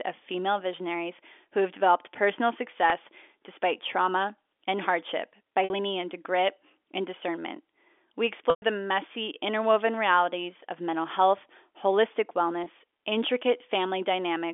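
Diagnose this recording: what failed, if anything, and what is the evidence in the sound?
The network stage failed, with packet loss with pitch repetition. Gaps at 2.90, 5.64, 8.50 and 12.64 s last 20, 60, 120 and 20 ms. The short ones sound briefly held and buzzy. The 120 ms gap fades into silence. The receiver repeated the last pitch period to bridge the missing audio.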